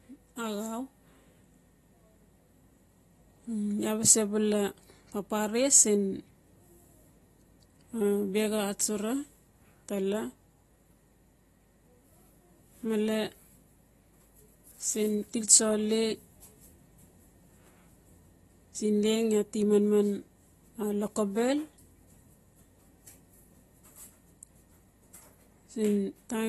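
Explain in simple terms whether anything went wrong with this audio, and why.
The speech carries plainly audible damage from start to finish, most likely from AAC compression squeezed down to a small file size. Nothing is left above about 12.4 kHz, so the voice sounds dull and muffled, lacking its normal crispness. The encoder also throws away detail it judges least noticeable, which gives sustained sounds and hissy consonants like s and sh a smeared, warbling or fizzy texture.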